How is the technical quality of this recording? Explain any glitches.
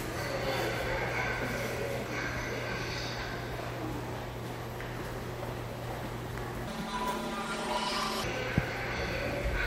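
One glitch stands out. From 6.68 to 8.24 s, planar audio is read as interleaved. Each 10 ms block plays left then right at double speed, giving a robotic 100 Hz buzz.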